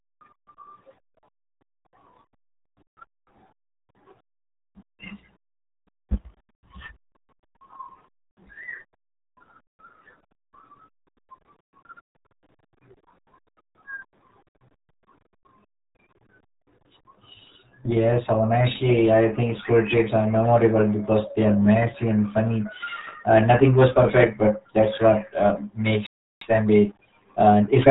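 From the very first second, the speech has that heavy RealAudio 14.4 codec sound: muffled, gargly, and clearly squeezed down to what fits an 8 kbit/s stream. Nothing above about 4 kHz gets through, so consonants lose their edge and the whole thing sounds boxed in. The coding damage is heavy, and the voice comes out smeared and bubbly rather than just dull, as you'd expect from an old dial-up-era speech codec working at full strain.

Near the end, at 26.07 s, the audio simply cuts to silence in mid-flow and stays dead for about 0.35 s, until 26.41 s. That's a playback stall. The likely cause is the player running dry of data or having its playback thread held up, so the output had nothing to play until it recovered.

Straight after, from 26.41 s to 27.87 s, you get a time-compressed catch-up. The player is clawing back the lost time by trimming out small slices and cross-fading over the joins. 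The result runs about 1.15 times faster but keeps its normal pitch, so it sounds hurried rather than chipmunky.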